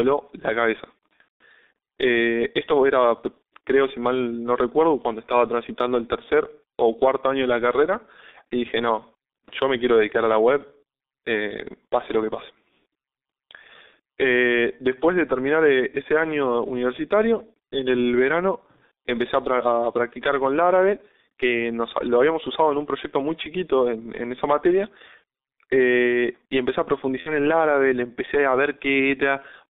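Throughout, the speech passes through the G.723.1 codec, with coarse 30 ms frames and slow model updates at roughly 6 kbit/s, and a band limited to 250 Hz–3.7 kHz, leaving it heavily muffled and hoarse with smeared consonants. From 1.22 to 1.43 s, VoIP packet loss concealed by the speech codec (a gap fitting six lost frames) makes the decoder extrapolate, stretching the sound into a fading buzzy tone or coloured noise that is muted from the third lost frame on. At 27.20 to 27.37 s, a shorter loss fitting two frames produces a similar brief fading smear.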